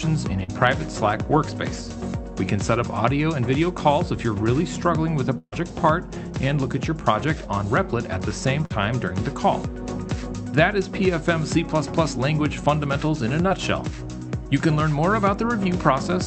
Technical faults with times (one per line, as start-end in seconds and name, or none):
0.43-0.50 short concealed packet loss
5.38-5.54 burst of packet loss
8.66-8.72 short concealed packet loss